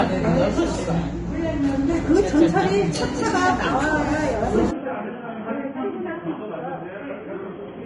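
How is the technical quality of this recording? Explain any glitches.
Technical quality is poor, with coding damage throughout and a sharp drop in fidelity partway through.

Vorbis compression, likely, runs through the whole clip: nothing is present above 10.6 kHz, and the coarsely quantised treble turns to hiss and grain, which fits a bitrate around 25 kbps.

Input switched to a poorer device, likely, at 4.71 s until the end: the band narrows to 3.3 kHz and the level falls roughly 10 dB with no gap, leaving a dull, boxy sound over faint added noise.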